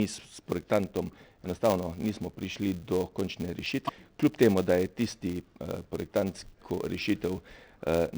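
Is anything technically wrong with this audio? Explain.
Yes, two faults. Throughout, a filter restarted on every block adds a 200 Hz buzz whose loudness follows the sound's level, unlike steady hum, because each block starts from zeroed state. From 3.85 to 3.90 s, damaged data in a compressed stream makes the decoder lose sync, giving a brief glitch.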